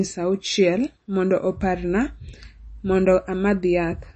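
Speech with plainly audible MP3 compression damage running throughout, likely from a low-bitrate encode around 32 kbps. Nothing sounds above 8.3 kHz. Unlike a simple low-pass filter, the remaining band also swirls and warbles as weak frequency components drop in and out frame to frame.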